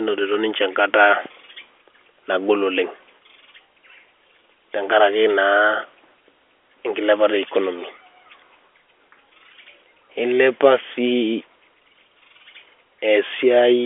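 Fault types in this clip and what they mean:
No faults can be heard in the speech, which carries the narrow band of G.711 telephone coding, about 300 Hz to 3.5 kHz with nothing above 3.7 kHz, as a fixed telephone line would deliver it.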